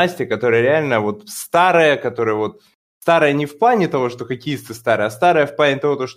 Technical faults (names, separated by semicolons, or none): none